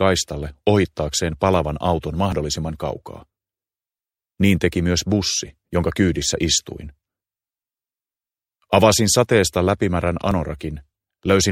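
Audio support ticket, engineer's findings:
Overlap between stream segments at 2.32 s: tiny skip, a few milliseconds dropped where segment timestamps overlap. Waveform shows abrupt step; spectrogram shows thin broadband vertical line.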